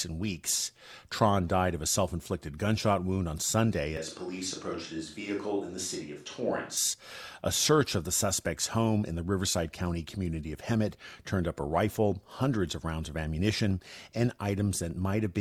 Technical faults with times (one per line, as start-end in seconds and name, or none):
3.97-6.77 switch to a distant microphone